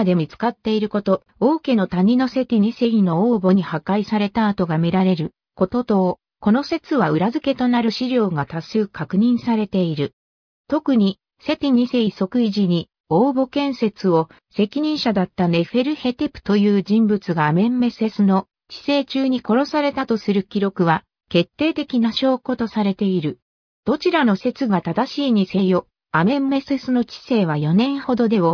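No technical faults are audible.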